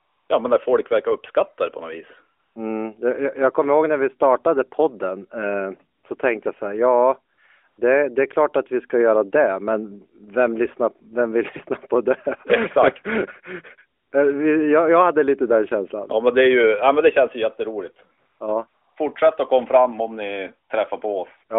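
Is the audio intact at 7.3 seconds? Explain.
No, there's a brief AMR comfort noise patch from 7.34 to 7.38 s, just before "det det är klart". The phone judged the line silent, so the receiver filled those 40 ms with smooth synthetic noise.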